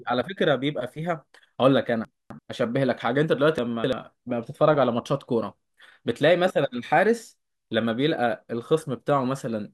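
At 2.05–2.39 s and 3.58–3.93 s, chunks out of order: an 85 ms chunk plays three chunks late, a jumble showing three abrupt waveform joins and thin vertical spectrogram lines.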